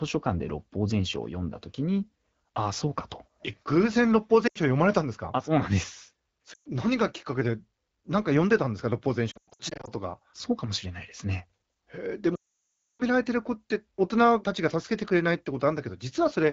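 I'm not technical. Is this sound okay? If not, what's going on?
No. The call has lost AMR speech frames: radio errors spoiled bits of speech, so the HD Voice phone guessed. You hear brief drops to near silence at 4.48 and 6.54 seconds, choppy stutters from 9.31 to 9.90 seconds, and a long drop to near silence from 12.35 to 13.03 seconds.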